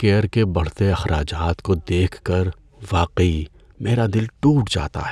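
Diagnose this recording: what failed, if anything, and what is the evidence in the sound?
Nothing failed here: no stage from the wiring to the playback leaves any mark on this speech recording.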